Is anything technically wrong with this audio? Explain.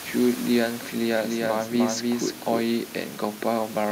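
Yes. From 1.09 to 2.73 s there is a doubled audio track: a second, full-band copy of the speech trails by roughly 300 ms, about 5 dB quieter, with no decay or room colour, starting and stopping abruptly. It is likely a second capture path or misaligned edit. The room noise, about 18 dB below the speech, belongs to the recording.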